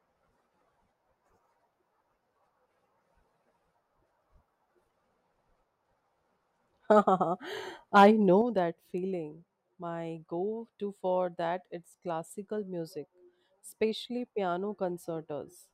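One channel drops out at 8.42 s and stays out until the end at 15.73 s. The speech abruptly falls by about 6 dB, most likely because one stereo channel went silent before the mono sum, which halved the shared signal and removed anything carried only by that channel.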